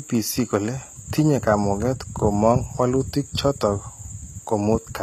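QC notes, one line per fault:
throughout, HE-AAC compression: the speech's s sounds come out plainly gritty and metallic, with nothing above 14.9 kHz. The treble is likely synthesised by spectral band replication, copied upward from lower bands under a coarse envelope, which fits a bitrate near 20 kbps.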